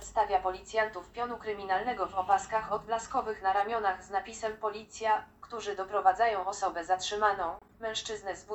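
At 7.59 s a corrupt frame was decoded, lasting to about 7.70 s. Damaged bits in a run of about seven compressed frames were played anyway, so misread gains and codes put energy at wrong frequencies, heard as a brief chirp or burst of noise peaking at about -40 dBFS.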